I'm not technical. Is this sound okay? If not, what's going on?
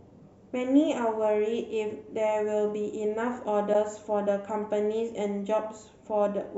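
No. A short piece of the compressed file was most likely cut out, which breaks the MP3 bit reservoir, the trick by which each small block of audio borrows leftover space from blocks before it. The next block then goes looking for its data and finds the wrong bytes. In this speech clip, that shows up from 3.72 to 3.75 s as a brief glitch about one block long, roughly a fortieth of a second, with the sound jumping ahead.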